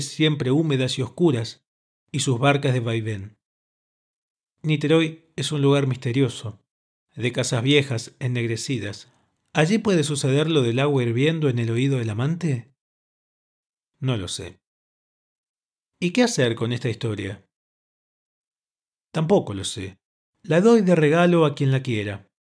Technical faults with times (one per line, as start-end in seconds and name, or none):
none